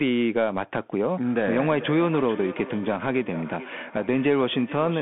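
From the start, the speech passes through a Bluetooth CVSD headset codec, whose one-bit slope tracking cuts everything above 3.8 kHz and leaves gritty hiss and scratchy s sounds. From 1.45 s to the end, a feedback echo between two devices loops the speech back roughly every 400 ms, with repeats peaking about 14 dB below the speech and sounding thin and ringing.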